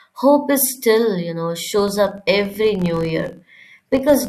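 Filter restarted on every block from 1.79 s onward: each block starts from silence, so a 46.9 Hz buzz follows the speech level, which fits 1024-sample blocks.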